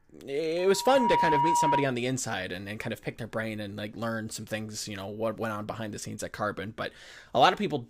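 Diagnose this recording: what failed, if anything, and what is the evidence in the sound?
A loudspeaker feedback squeal, in the acoustic and analogue path between a loudspeaker and the microphone feeding it, runs from 0.58 s to 1.99 s in the speech. A pure tone near 957 Hz swells over roughly half a second and settles about 5 dB above the speech, then stops just before "inside and and kind". At that frequency the loop gain exceeded unity, so the tone fed on itself.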